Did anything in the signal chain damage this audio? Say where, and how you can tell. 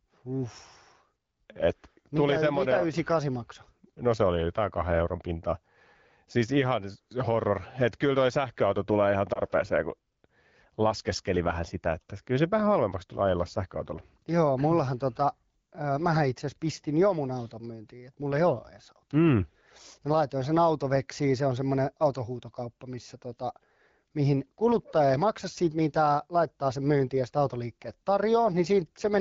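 Yes. At the network stage, lost AMR speech frames damage the speech around 9.33 to 9.40 s, right after "toi sähköauto tulee ihan". The sound gives a brief dip, then resumes, which fits a single dropped 20 ms frame. The AMR wideband decoder, running at a rate that fits 12.65 kbit/s, filled the gap by repeating the last pitch and vocal tract settings at reduced gain. A packet-loss dropout would leave a hard gap or click. Here the sound dips and recovers instead.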